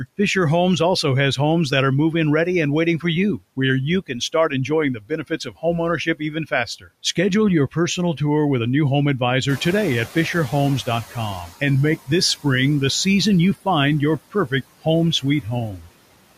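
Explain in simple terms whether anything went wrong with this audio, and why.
Several things went wrong, all caused by the noise suppressor.

Noise suppressor artifacts run through the whole clip. The suppressor works in short slices of time, turning down whichever frequency bands it judges to be steady background noise. Because those decisions change from moment to moment, the leftover noise dips in the pauses and comes back under the talking.

Speech cut by the noise suppressor happens four times: from 4.01 to 4.71 s, 4.94 to 5.64 s, 5.97 to 6.88 s, and briefly at 15.77 to 15.9 s. In these moments the suppressor mistook quiet parts of the speech for noise and turned them down along with the background. Within each stretch, only some of the sound is affected, totalling a fraction of a second each time. Those bits sound swallowed or noticeably fainter.

Noise suppressor catching up occurs from 9.48 to 11.49 s. 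At about 9.5 s the room noise gets clearly louder, though it stays well below the speech. The suppressor's picture of what counts as noise was still based on the quieter room, so for roughly two seconds the louder noise comes through with less cleaning. It then settles down as the suppressor adjusts to the new level.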